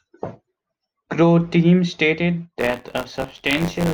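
A robotic buzz near 94 Hz rattles through the speech from 2.58 to 3.93 s. This is buffer tearing: each 512-sample-like period splices in a small slice of audio about 20 ms old.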